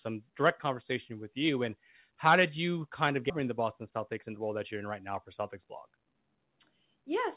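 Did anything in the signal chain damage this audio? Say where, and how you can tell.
Yes. At 3.3 s there is a skip ahead in the network and jitter buffer stage. Roughly 0.7 s of speech is gone. The two sides are butted together with no fill. Queued audio was discarded to cut a delay of about that size.

From 3.88 to 4.4 s comes a jitter buffer speed-up. Speech runs about 9% fast at unchanged pitch and sounds hurried. The buffer was over target. It trimmed short pitch-period pieces repeatedly, about 50 ms in total, to drain the backlog.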